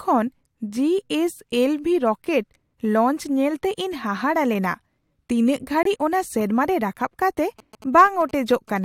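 A speech recording with two distinct faults. At 5.83 s the audio drops out for about 42 ms in a corrupt frame muted event. Damaged compressed data was rejected by the decoder and replaced with silence, and the hole's length suggests two consecutive codec frames. On a waveform it appears as a flat, near-silent gap with sharp vertical edges; on a spectrogram, a thin blank vertical stripe across all frequencies, with the timeline intact on either side. From 7.59 s to 8.78 s, GSM signalling bursts intrude. A nearby 2G phone exchanging short radio bursts with the network is being rectified by the audio circuitry, producing a galloping ticking buzz repeating at about 217 Hz, roughly 20 dB below the speech. A spectrogram shows this as evenly spaced horizontal lines at 217 Hz and its harmonics, chopped into short rhythmic blocks, while the waveform carries clusters of tiny regular spikes riding on the signal.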